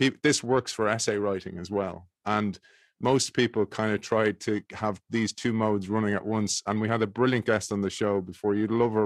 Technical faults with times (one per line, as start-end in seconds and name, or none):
0.00-9.06 periodic clock jitter